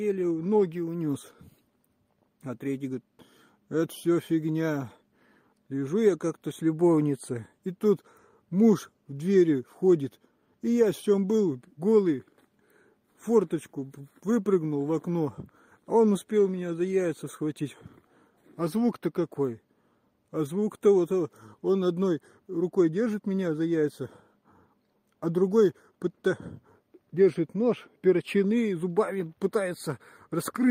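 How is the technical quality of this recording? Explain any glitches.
No glitches or faults heard.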